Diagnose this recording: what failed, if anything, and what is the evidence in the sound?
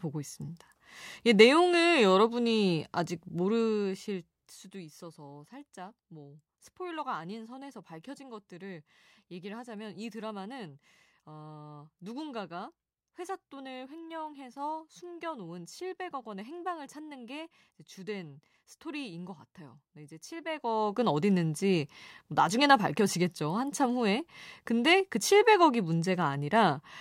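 The fault is zipper noise at the gain stage in the driver or buffer path. Between 20.46 and 21.1 s, a level change of roughly 15 dB carries a fine ticking at about a hundred clicks a second. The gain is applied in unsmoothed steps, once per block, and each jump leaves a small discontinuity. This differs from a fader move, which glides silently, and from random crackle, which lacks the steady rate.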